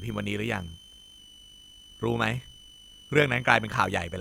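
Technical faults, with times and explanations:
Throughout, switching supply whistle: a thin high tone around 3 kHz sits under the speech for the whole clip, roughly 25 dB below it, its pitch wandering between about 2.96 and 3.16 kHz. A switching power supply is cycling at an audible rate, in burst mode or beating against another converter, and that switching frequency is leaking into the audio path. The pitch moves because the switching rate follows the load.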